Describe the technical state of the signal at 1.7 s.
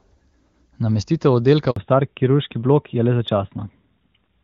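At 1.70 s a handover gap begins: the speech cuts out for about 60 ms, to 1.76 s, as the call switches networks and no speech frames arrive. The sound decays almost immediately into silence, and whatever was spoken across that span is simply gone.

From 1.76 s onward there is a fallback to narrowband. Before the gap the sound has the full HD Voice bandwidth, consistent with AMR-WB at around 23.85 kbit/s. After it nothing remains above 4 kHz, which fits AMR-NB at 12.2 kbit/s, and the speech sounds duller, rougher and more muffled through to the end.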